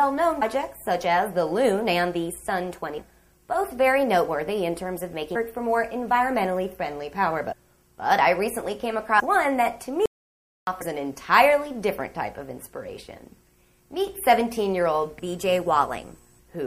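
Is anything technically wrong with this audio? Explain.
Yes. Heavy MP3 compression runs throughout, likely from a low bitrate around 64 kbps. The treble is cut flat and weak detail swirls, showing on a spectrogram as a hard ceiling with flickering holes.

Compressed frames skipped at 0.41, 2.97, 5.35, 7.51, 9.19 and 10.81 s. Each time the audio jumps ahead by whole 26.1 ms frames, roughly a tenth to half a second. Overlapping frames blur each join into a brief smeared blip, visible as an abrupt discontinuity without a sharp click spike.

An audio dropout to silence runs from 10.06 to 10.67 s, about 0.61 s. The input was likely lost while writing continued. The waveform goes silent, with no room tone.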